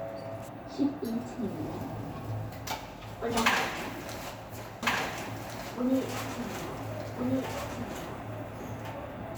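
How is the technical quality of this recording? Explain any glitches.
The recording has one clear fault. From 4.83 s to the end, a doubled audio track appears. A second full-band copy of the sound trails about a second and a half behind, a few decibels quieter, with no decay or room colour. It cuts in abruptly, likely from a slower second capture path or an edit holding two offset copies.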